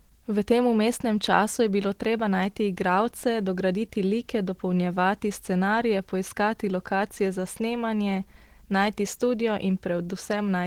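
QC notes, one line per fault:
Throughout: Opus compression. The speech is hoarse, grainy and somewhat muffled, plainly so across the whole clip, with the upper bands filled by rough noise rather than clean detail. This fits a likely low-rate Opus encode in hybrid mode, around 16 kbps.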